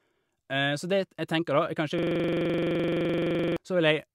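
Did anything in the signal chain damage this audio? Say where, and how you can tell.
Yes, at the driver or buffer stage. From 1.99 to 3.57 s, one 42.67 ms slice repeats exactly, dozens of times, as a rapid 23.4 Hz stutter. This is a system hang loop. The system froze while the hardware kept replaying one ring buffer, which fits a 2048-sample buffer.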